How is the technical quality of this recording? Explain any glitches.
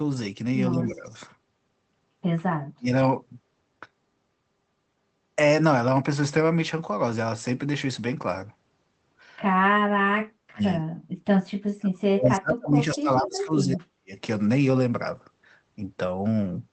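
The recording has repeated level dropouts and one brief, faint echo.

Speech suppressed in double talk occurs at 0.73–1.06 s, 2.76–2.92 s, 9.98–10.63 s and 11.77–14.12 s. The voice dips by about 10 dB at first, then by up to about 40 dB, nearly vanishing for around two seconds late in the clip. This is likely an echo canceller turning down the local talker along with the loudspeaker echo while the two sides overlap.

An echo leak appears at 1.04–1.14 s as a faint copy of the voice, 172 ms late and about 30 dB down. It is likely loudspeaker pickup that the canceller failed to remove.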